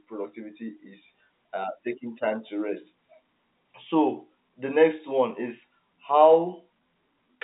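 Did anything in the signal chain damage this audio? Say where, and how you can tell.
No, nothing in the signal chain stood out on listening; the speech carries the narrow band of ordinary G.711 telephone coding, with nothing heard above 3.8 kHz.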